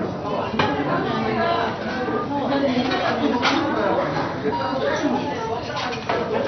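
MP2 compression is the likely cause of damage across the whole clip: nothing survives above about 6.1 kHz, so the sound is dull, and the remaining sub-bands flicker on and off with coarse, gurgling granularity, heavy damage that fits a starved bitrate around 48 kbps.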